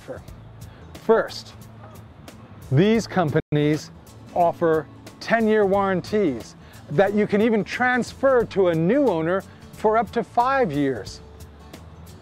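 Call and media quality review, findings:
Playback stall, 3.40–3.52 s: player likely starved of data or thread blocked; output silent about 120 ms, sound halting mid-flow before resuming.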